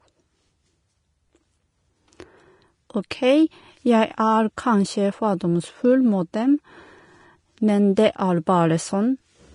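Throughout, the speech sounds hissy and grainy with nothing above 10.5 kHz, likely Vorbis compression, whose coarse treble quantisation turns fine detail into noise.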